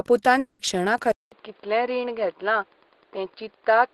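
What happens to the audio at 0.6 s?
At 0.6 s the audio is inside a long network dropout that runs from 0.39 to 0.62 s. About 200 ms of speech never arrives, likely because packets were lost in transit. The receiver's concealment fills the whole gap by extending the last received sound into a buzzy, fading tail, so the gap never drops to true silence. The speech then resumes at 0.62 s with that stretch missing.

Wi-Fi interference is also present at this moment, as it is through the whole clip. A nearby radio's beacon, repeating every 102.4 ms, is being rectified by the audio circuit and heard as a steady tick about ten times a second. It sits well below the speech, roughly 35 dB down.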